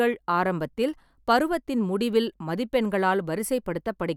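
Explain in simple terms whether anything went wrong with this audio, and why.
Nothing went wrong here.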